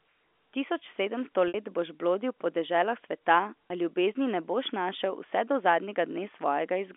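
Packet loss with pitch repetition struck twice. About 60 ms of speech was lost at 1.48–1.54 s, which fits three 20 ms packets, and about 20 ms at 3.68–3.70 s. Each gap was patched by repeating the last pitch period, so the shorter second one sounds like a brief, held, buzzy tone, while the longer first one fades into silence before the speech returns with a short cross-fade.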